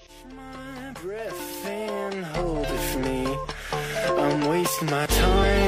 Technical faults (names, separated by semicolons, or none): damaged data in a compressed stream